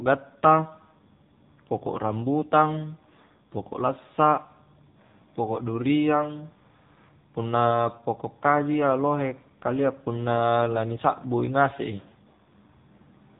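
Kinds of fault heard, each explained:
AMR narrowband mobile codec: the speech has been squeezed through the narrowband mobile phone codec, so everything is resampled to 8 kHz and rebuilt from a vocal-tract model fed with a handful of pulses per short subframe. Nothing gets through above about 3.8 kHz, so the top end is gone and consonants lose their bite. The damage is plainly audible as a buzzy, synthetic edge on the voice, which points to one of the lower bitrate modes, around 7.4 kbps.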